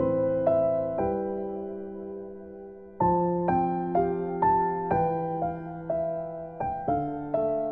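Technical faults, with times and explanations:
Nothing here stands out as a technical problem; it all sounds just as it should.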